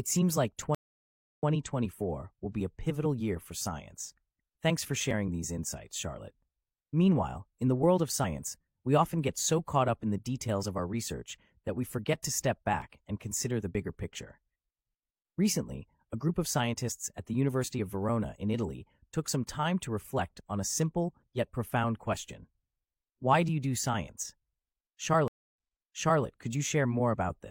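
At 0.75 s, after "seems like", there is a stream reconnect. The connection breaks and 0.64 s of silence follows. A fresh decoder then resumes about 0.09 s earlier, repeating a sliver. Small skips follow at 5.11, 8.24, 12.82 and 13.75 s. Each is likely a dropped buffer (overrun), losing a few tens of milliseconds. The one at 8.24 s falls between "in the world of" and "we often get so". The one at 12.82 s falls between "we forget to step" and "and consider the". At 25.28 s a second reconnect gives 0.26 s of silence, then replays about 0.7 s.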